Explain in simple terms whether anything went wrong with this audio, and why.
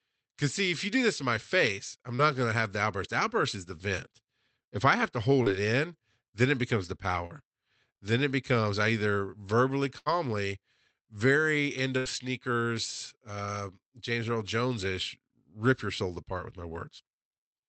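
Yes, a few small things went wrong. This is speech from a call, and parts of it never arrived in time.

The first problem is short concealed packet loss. It happens three times: at 2.15 to 2.22 s, between "in my face I'm" and "gonna have the outburst"; at 5.43 to 5.49 s; and at 7.26 to 7.33 s, right after "then it becomes the". Each time, about 40 ms of sound went missing. The receiver covered the hole by stretching out the last bit of sound, then blended back in. You hear a quick smear or wobble, and a short sound may disappear.

The second problem is a burst of packet loss. It happens twice: at 9.98 to 10.09 s, and at 11.98 to 12.08 s, between "very end" and "sneakers uh". This time about 80 ms went missing in a row. The receiver kept the last sound going and let it fade, so you hear a brief held buzz or fading hiss. Then the speech picks up further along, and the piece in between is simply gone.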